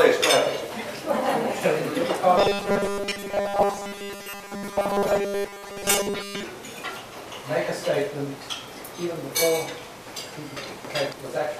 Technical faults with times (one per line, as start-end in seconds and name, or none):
2.38-6.43 robotic sound from repeated short buffers
10.57-11.13 frames out of order